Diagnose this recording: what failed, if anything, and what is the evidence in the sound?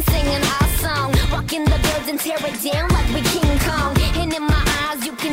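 Nothing failed in this recording.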